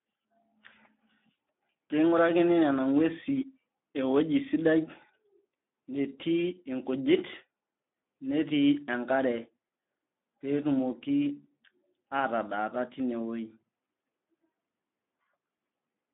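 Speex codec damage runs from start to finish. This CELP speech codec rebuilds the voice from a small set of filter settings and a coarse excitation signal, and here it has too few bits for that excitation. The speech comes out noisy and hoarse, which fits a bitrate around 11 kbps. The audio is also confined to a telephone-like band of 200 Hz to 3.6 kHz, so it sounds thin and boxy.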